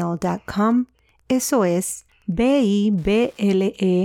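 A faint, steady ticking runs under the speech from start to finish, clicking just under ten times a second and sitting roughly 45 dB below the speech. It is Wi-Fi interference: a Wi-Fi radio near the audio circuit sends its beacon every 102.4 ms, and the circuit rectifies each burst of radio energy into an audible tick. The ticks therefore repeat at that fixed interval, regardless of what the speaker is doing.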